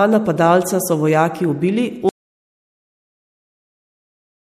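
Throughout the speech, the sound has the watery, swirling texture of MP3 compression, and it is plainly audible. The likely cause is an encoder short of bits, switching weak frequency components on and off from frame to frame. The treble stops abruptly at 15.4 kHz, the hard ceiling of a lossy encoder rather than the gradual roll-off of a filter or microphone, and the degree of damage fits a rate around 64 kbps.

At 2.09 s, just after "napadalca so vojaki ubili", the audio drops out to silence and never returns before the end. This is most likely lost input written as silence. The gap holds no room tone, no hiss and no residual signal, and that distinguishes a true dropout from a quiet pause or a noise gate closing. The speech is cut off mid-flow rather than fading out.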